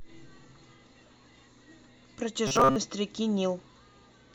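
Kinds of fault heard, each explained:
Robotic sound from repeated short buffers: from 2.47 to 2.77 s the speech turns into a rigid 134 Hz buzz, likely from a 7.5 ms chunk looping over most of the real audio.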